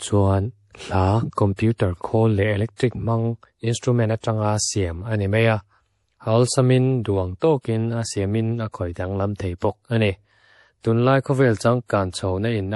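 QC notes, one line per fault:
Throughout: MP3 compression. The speech has nothing above 11.4 kHz and plainly audible watery, swirly damage on sibilants, which points to a low bitrate of about 48 kbps. The likely cause is bits running short, so weak frequency lines blink on and off between frames. On a spectrogram, a hard ceiling and patchy, flickering high bands appear.
1.56–1.59 s, 2.76–2.80 s, 9.36–9.40 s: pre-echo. A short hiss, 27, 35 and 32 ms long, leads each sharp attack, and the onsets sound soft and smeared. Quantisation noise sized for the loud onset spreads back across the quiet start of the block. On the waveform, low noise ramps in just before each transient.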